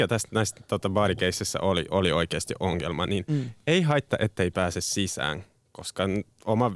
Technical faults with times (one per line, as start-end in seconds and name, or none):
none